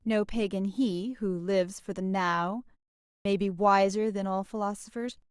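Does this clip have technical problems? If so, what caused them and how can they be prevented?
Yes. A clipped start after a pause occurs at 3.07 s. After a 0.39 s gap, the output device idled and needed time to wake, so the first 183 ms of speech is lost until 3.25 s. Keeping the output stream active through silences prevents this.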